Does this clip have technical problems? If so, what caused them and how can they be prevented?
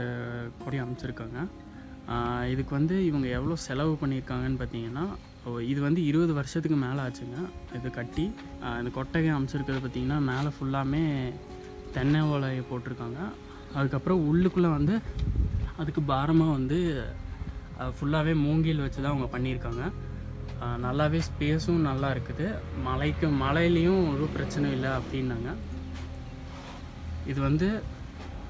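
No, there's nothing technically wrong to hear here, so there's nothing to track down or guard against this time.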